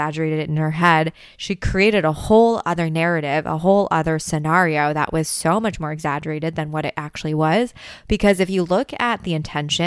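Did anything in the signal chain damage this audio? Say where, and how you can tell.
No, nothing in the signal chain stood out as damaging this recording when I listened to it.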